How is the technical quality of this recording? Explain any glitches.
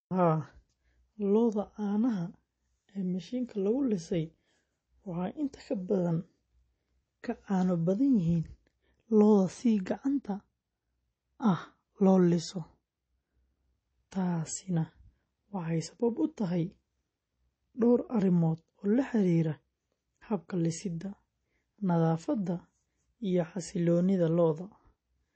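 The quality is limited by one fault that persists through the whole recording.

Low-bitrate audio saved at a high bitrate, throughout: nothing reaches above about 8.4 kHz, leaving the speech dull. That ceiling likely comes from an earlier MP3 encode around 32 kbit/s. Re-saving at something like 192 kbit/s cannot recover what was discarded.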